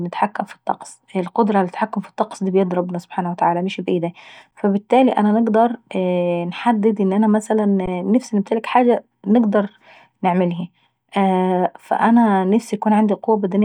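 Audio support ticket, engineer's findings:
Underrun with held sample at 4.51 s and 7.86 s in the speech. Sound freezes for about 13 ms and 16 ms, then resumes softly. Probable component: output buffer feeding the DAC. Buffer ran dry and the converter held its last value, so the waveform goes flat. Unlike a zero-fill dropout, there is no hard click at onset. Nothing appears lost, since playback picks up where it stopped.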